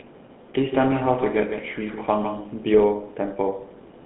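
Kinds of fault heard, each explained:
GSM full-rate codec: speech pushed through a pulse-driven vocal-tract model comes out plainly buzzy and gravelly, squeezed into a band from about 150 Hz to 3.6 kHz.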